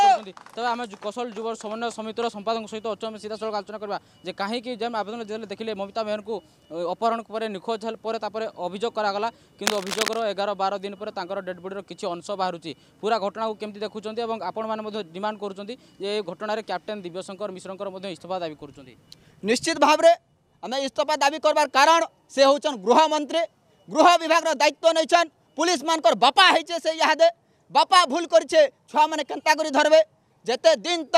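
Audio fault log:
9.65 to 10.23 s, cable scratch noise. A dense, uneven burst of scratching rides over the sound for just over half a second. It sits only about 5 dB below the signal, so it is prominent. A worn cable or connector being moved, with its contact resistance jumping rapidly, is the likely cause.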